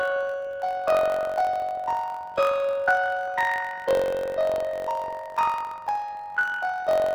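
Throughout this everyday-sound recording, audio stored in planar blocks, with all left-channel samples followed by all right-channel samples, is being read as interleaved. Each block of about 21.8 ms therefore plays twice at double speed, left channel then right, which shifts the content up an octave (12 semitones) within each half while keeping the overall pace intact. Because the blocks are this short, the octave shift is hard to hear. Instead, a robotic buzz at the block rate of about 45.9 Hz dominates the sound.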